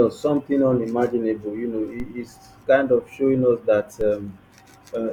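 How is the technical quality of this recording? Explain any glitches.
Two low thumps break into the speech, at 2.00 s and 4.01 s. Each is a DC step: the waveform's zero line jumps by about −23 dBFS, then a 5 Hz high-pass bleeds the offset away.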